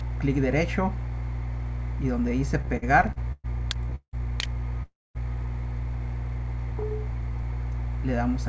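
From 2.62 to 3.46 s there are repeated stalls (stutter): packets kept showing up late, so the jitter buffer drained seven times, with the longest gap about 116 ms. Each gap gets padded by stretching the last sound, so nothing drops out, but roughly a third of that stretch is filler and it drags and hiccups.

Then come two call audio freezes, at 3.95 to 4.15 s and 4.83 to 5.17 s. Packets were likely held up in transit, so the buffer ran dry. You hear the last sound carried on as a fading buzz or hiss that falls to silence for about 90 ms and then about 230 ms. Playback resumes where it left off, so 175 ms and 320 ms of delay get added.

Throughout, there's nothing above 8 kHz, which fits the G.722 call codec.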